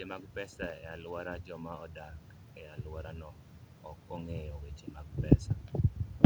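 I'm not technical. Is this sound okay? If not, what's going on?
Yes, nothing wrong can be heard anywhere in this speech recording.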